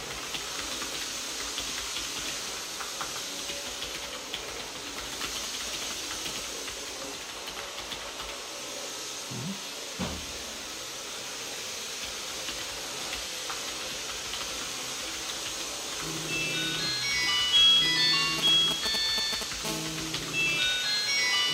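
From 18.39 s to 19.65 s, GSM signalling bursts break into the sound. A 2G phone close to the recording chain is exchanging short control transmissions with its network, and some stage of the audio circuit rectifies the radio pulses into audible energy. The result is a galloping dit-dit-dit of brief buzzes built on the 217 Hz burst rate, sitting at roughly the same loudness as the wanted sound.

At 19.65 s the pattern turns into continuous GSM phone buzz, which runs until 21.48 s. The phone has moved into a call and now transmits its time-slot bursts steadily at 217 times a second, so the rectified interference becomes an unbroken hard, raspy tone at 217 Hz, dense with harmonics and unrelated to the recorded material. It sits about 14 dB below the sound, lower than the preceding bursts but constant.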